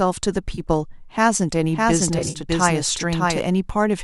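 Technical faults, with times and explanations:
0.55–0.60 s, AAC frame loss with concealment: a brief smeared, noisy patch about 50 ms long, with roughly 30 ms of actual gap, which fits around three lost 10 ms frames. The decoder papers over the hole by reusing the last good spectrum with scrambled phase, so you hear a phasey blur.
1.62–3.40 s, doubled audio track: a second full-band copy of the sound runs about 0.7 s behind and at about the same level as the original. It has no reverb tail or room colour, so it reads as a dry duplicate, not an echo. It cuts in and out abruptly at both ends. The likely cause is the same audio being captured again through a slower path and mixed back in.
2.19–2.39 s, AAC frame loss with concealment: a rougher, patchier stretch where about 110 ms of audio is missing, scattered across roughly 160 ms. The longest single dropout is around 50 ms. Each gap gets the same spectral fill-in, so the sound smears. 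This overlaps the doubled stretch.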